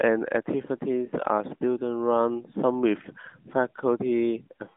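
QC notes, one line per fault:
The speech carries no faults, just the narrow 200 Hz to 3.6 kHz band of an AMR narrowband mobile codec line with nothing above about 3.7 kHz and only a light coded texture, which fits the 12.2 kbps mode.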